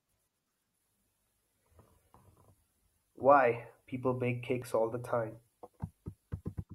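At 2.14 s and again at 4.62 s, just before "all the time", the speech jumps as a tiny sliver vanishes, likely audio missing between chunks roughly 2.5 s long.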